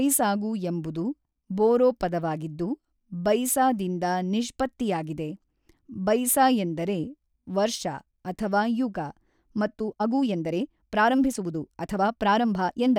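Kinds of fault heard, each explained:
Time-stretched section, 9.69 s to 12.99 s: from 9.69 s to the end of the clip the speech suddenly runs about 1.35 times faster, yet its pitch does not rise. It sounds rushed. The likely cause is software squeezing this stretch to fit a shorter length, keeping the pitch steady by cutting out many small slices of the waveform and joining the remainder back together.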